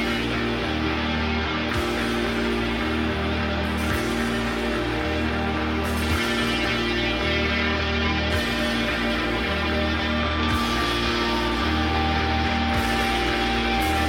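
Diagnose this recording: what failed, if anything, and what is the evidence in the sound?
No fault found in this recording.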